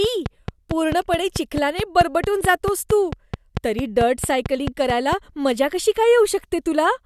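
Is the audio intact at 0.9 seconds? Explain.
No. A train of clicks runs from 0.04 to 5.14 s, ending just before "मजा कशी": regular, same-shaped ticks about 4.5 per second, around 10 dB above the speech and audible in pauses too. This steady repetition sets it apart from random crackle. The likely cause is interference or a faulty connection or power supply.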